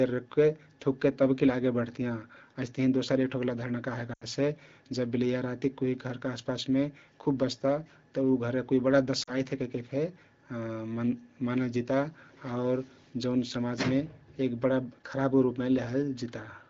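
Lost AMR speech frames interrupt this wideband speech twice. At 4.13 to 4.25 s about 80 ms is concealed, which fits four dropped frames. At 9.24 to 9.30 s it is 40 ms. The decoder repeats its last good settings with falling gain, so the sound drops to near silence within two frames.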